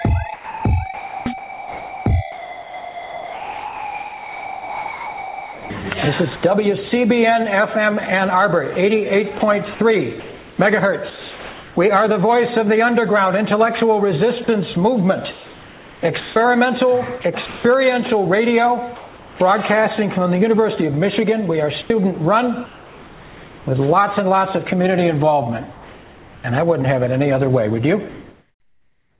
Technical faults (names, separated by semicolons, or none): sound chopped by the voice detector; sound dropped by the voice detector; comfort noise in place of the background; onset clipped by the voice detector